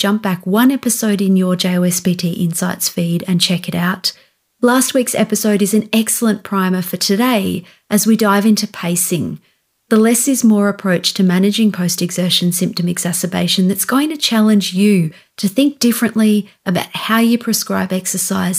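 No technical faults can be heard anywhere in the recording.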